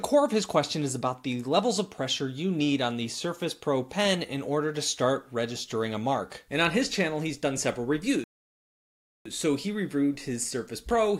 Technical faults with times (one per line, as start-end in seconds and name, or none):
8.24-9.25 rebuffering stall